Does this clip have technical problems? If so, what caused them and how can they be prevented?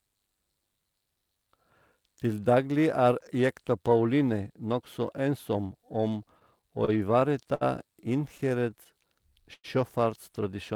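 Yes. Repeated stalls (stutter) occur from 6.39 to 7.63 s and 8.25 to 9.66 s, eight brief holds in each, the longest 62 ms and 99 ms. Packets arrived late, draining the jitter buffer, so the receiver stretched the last sound before resuming. A deeper adaptive jitter buffer and a more stable network path would prevent this.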